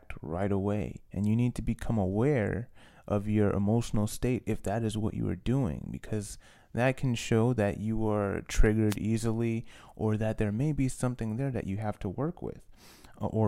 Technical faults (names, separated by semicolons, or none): wireless microphone noise hit